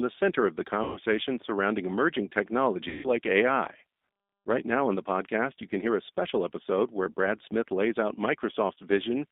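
From the start, the speech passes through a G.729 codec at 8 kbit/s, confined to 250 Hz to 3.6 kHz, leaving it audibly rough, thin and synthetic throughout.

VoIP packet loss concealed by the speech codec occurs at 0.84 to 1.0 s, after "center of the" and before "surrounding emerging". About 120 ms of audio goes missing, which fits four lost packets. The decoder stretches its last pitch and filter into a fading buzz or coloured noise. At 2.89 to 3.07 s, roughly 150 ms drops out, which fits five packets, and the speech smears into a similar decaying buzz or noise before it recovers.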